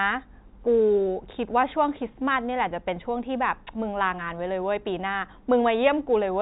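No technical faults are audible.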